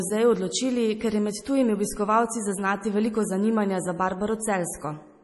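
Speech throughout with heavy MP3 compression, likely from a low bitrate around 32 kbps: watery, swirly artefacts and nothing above 11.5 kHz, the treble cleanly cut off.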